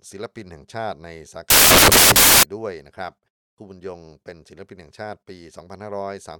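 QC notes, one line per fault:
1.50–2.43 s: samples built from the wrong bytes. The bytes of each sample are misassembled, so noisy low-order bits dominate and the speech becomes loud, harsh broadband noise.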